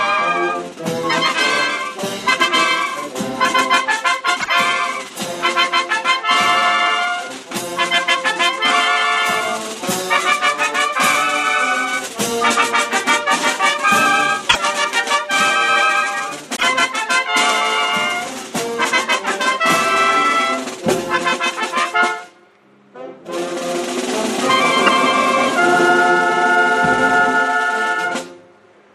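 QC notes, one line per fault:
4.38–4.50 s, 14.46–14.57 s, 16.52–16.63 s, 24.86–24.89 s: damaged data in a compressed stream. Corrupted frames make the decoder lose sync and resynchronise, producing brief squawks or blips.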